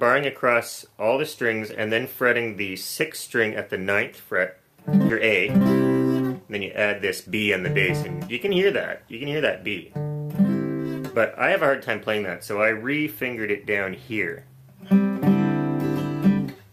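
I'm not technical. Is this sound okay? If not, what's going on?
No. Around 5.09 to 5.11 seconds there is a skip ahead. Roughly three-quarters of a second of sound never arrives, and playback jumps straight to what comes next with no pause and no filler noise. Unlike a dropout, where you'd hear a brief silence or a hiccup, nothing marks the spot except an abrupt join. The sound simply lurches forward, as if someone nudged a record needle.

There are also three stretches of jitter buffer speed-up. The receiving side had built up too much waiting audio and trimmed tiny slices out to catch up. From 6.19 to 6.86 seconds and from 8.49 to 10.38 seconds the sound runs about 5 percent fast, and a brief moment at 7.26 to 7.30 seconds is squeezed to about 2.2 times normal speed. In total only a few tenths of a second are removed, so it sounds hurried rather than chopped. The pitch stays the same, which is what separates this from a sped-up tape that turns squeaky.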